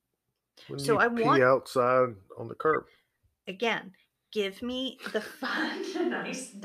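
A switch to a distant microphone occurs at 5.48 s in this speech recording and lasts to the end. The voice abruptly turns roomy and hollow, loses low-end body, drops by roughly 5 dB, and sits over a faint bed of background noise, about 40 dB below the speech. The sudden change in tone and level likely means the close microphone's signal dropped out, leaving only a pickup farther from the talker.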